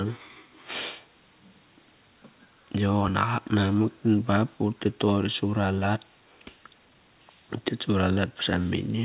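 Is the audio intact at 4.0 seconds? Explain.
Yes, at 4.0 s the speech runs through intact, with no dropout, click or break at that moment.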